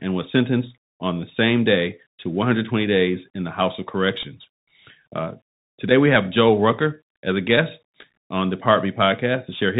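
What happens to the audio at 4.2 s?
At 4.23 s there is a Bluetooth headset packet repeat: one small tick in the speech, about 3.8 ms long, which points to a single lost voice packet between headset and phone. Rather than fill the gap with silence, the chip decoded the previous packet's bits a second time, so a sliver of sound replays and its edges tick. Because only one packet was repeated, there is no steady buzz near 267 Hz as in a run of repeats, and no hole of silence as with a plain dropout.

Underneath that tick, the Bluetooth CVSD headset codec is plainly audible. Its one-bit, 64 kbit/s stream signals only up or down while the step size adapts, so nothing above 4 kHz passes, s sounds come out scratchy, and a granular hiss sits under the speech. That roughness belongs to the codec around the moment. The tick itself is the repeated packet.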